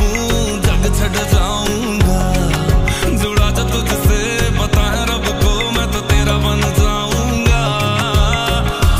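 No technical faults can be heard anywhere in this clip.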